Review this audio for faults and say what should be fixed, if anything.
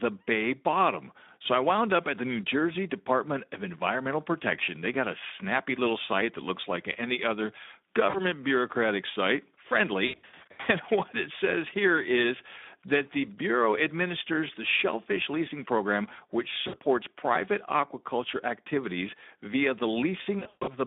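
Speex codec damage runs through the whole clip. The speech is confined to a narrow line band of 200 Hz to 3.6 kHz, and the CELP coder has too few bits to model the excitation, so voiced sounds come out noisy and hoarse, with a plainly audible rough texture. That level of damage points to a low Speex quality setting, around 11 kbps. To prevent it, raise the Speex quality setting or switch to a wideband codec with a higher bitrate.

VoIP packet loss concealed by the speech codec occurs four times: at 8.09–8.23 s (about 40 ms missing), 10.05–10.68 s (about 420 ms missing in gaps scattered over 600 ms, the longest 80 ms), 16.67–16.76 s (about 60 ms), and 20.39–20.74 s (about 220 ms over 280 ms, the longest 140 ms). In each gap the decoder keeps replaying its last pitch and filter at falling gain, so the speech smears into a fading buzz or coloured noise. Because every frame is built on the one before, the voice stays weak and distorted briefly after real packets return. 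To prevent it, use a jitter buffer with forward error correction or redundant packets on the lossy link.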